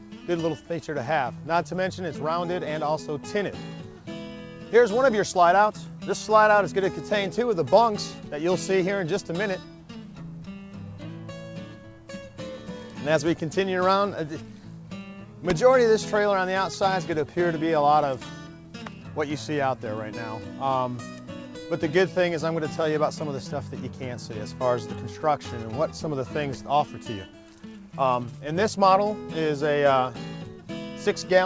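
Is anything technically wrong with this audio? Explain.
No, nothing here is technically wrong: the audio just carries the ordinary character of a call line, with nothing above 8 kHz, which fits a wideband call codec such as G.722.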